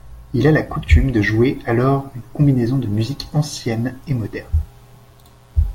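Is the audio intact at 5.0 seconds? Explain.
No. Mains buzz runs from 2.93 s, just after "alors une combinaison de", to the end at 5.74 s. Switching spikes from a 60 Hz supply leak in twice per cycle, spraying harmonics into the kilohertz range, heard as a steady raspy buzz about 40 dB below the speech.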